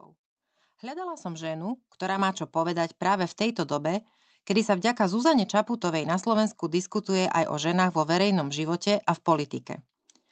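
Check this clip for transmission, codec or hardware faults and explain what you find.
The microphone volume is stepped up twice, at 1.17 s by about 9 dB and at 2.19 s by about 5 dB. In each case the call software has judged the input too quiet and raised the device's input gain in a single jump, so speech and background noise grow louder together, instantly. On a waveform the envelope steps abruptly wider at each point; on a spectrogram every frequency band brightens at once, producing a vertical edge.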